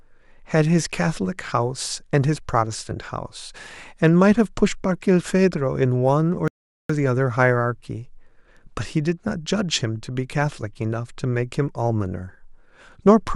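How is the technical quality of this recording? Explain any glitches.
The recording has one clear glitch, a playback stall. From 6.48 s to 6.89 s the speech cuts out abruptly into silence for about 0.42 s, then resumes. The likely cause is that the player's buffer ran dry, or its playback thread was briefly blocked, so no samples reached the output until data was available again. To the ear it is a sudden hole in mid-flow, a dead gap rather than a click or dropout of just a few milliseconds.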